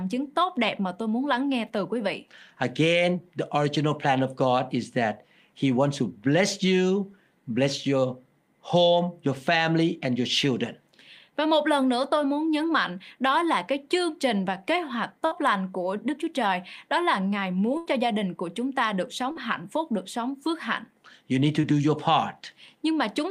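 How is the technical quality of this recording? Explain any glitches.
The speech has four dropouts from lost packets in its second half.

Burst of packet loss, 15.25 to 15.33 s (between "trình và kế hoạch" and "lành của") and 17.77 to 17.87 s (before "cho gia đình của"): the sound stretches into a fading buzz or hiss, then jumps ahead. Runs of packets were lost or arrived too late, so the receiver extended the last sound for about 60 ms and then 80 ms, and that audio is gone.

Short concealed packet loss, 19.31 to 19.37 s (between "của chúng ta được" and "hạnh phúc được sống") and 21.61 to 21.65 s: a brief smear or wobble. About 40 ms and 20 ms never arrived, and the receiver patched each gap by continuing the preceding sound.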